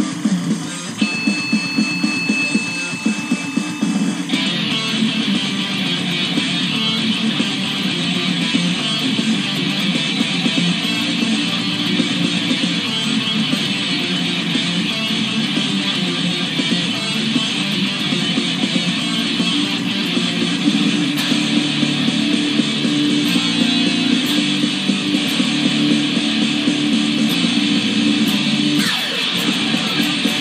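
Timecode bleed runs throughout: 25-frame linear timecode leaking from a neighbouring line adds a chirping warble near 1 and 2 kHz, about 20 dB down.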